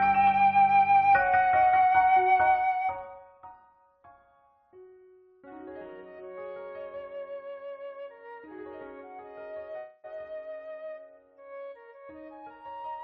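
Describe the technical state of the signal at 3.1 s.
At 3.1 s you're right in the middle of some zipper noise, running from about 2.36 to 3.68 s. The level drops by about 20 dB in unsmoothed steps, around 150 a second, and each jump clicks, so you get a fine ticking buzz riding on the sound during the fade.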